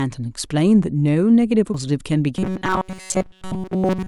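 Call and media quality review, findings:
Compressed frames skipped, 1.74 s: decoder drops what sounds like two whole frames, about 200 ms of speech gone. Audio jumps forward. Jump size fits a frame length near 93 ms.

Robotic sound from repeated short buffers, 2.37 s to end: likely playback starved of new data, filling gaps by looping the last tiny buffer. Most of the audio is replaced by repeats. Speech becomes a rigid metallic buzz at 188 Hz, which fits a buffer of about 5.3 ms.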